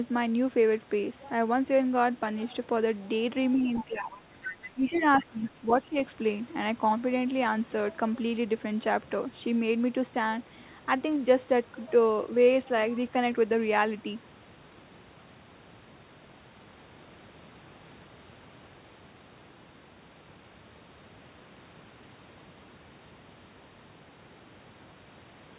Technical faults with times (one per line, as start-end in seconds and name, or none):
3.53-4.20 other side's voice leaking through
3.53-5.96 speech suppressed in double talk
4.63-5.76 other side's voice leaking through